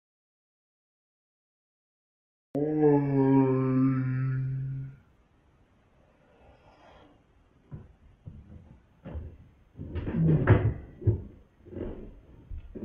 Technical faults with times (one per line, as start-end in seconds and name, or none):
0.00-2.55 audio dropout to silence
4.38-8.95 call bitrate drop